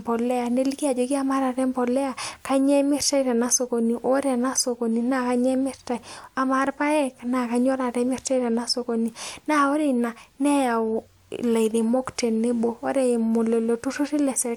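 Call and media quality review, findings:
No faults found in the speech recording. Nothing to raise against any component in this review.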